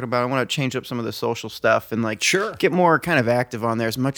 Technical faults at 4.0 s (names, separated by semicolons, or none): none